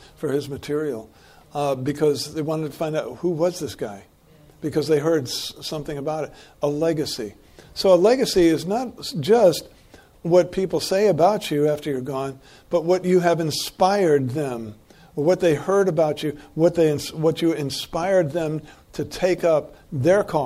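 Nothing in this recording stands out as a technical fault; the audio just runs along steadily with nothing going wrong at any point.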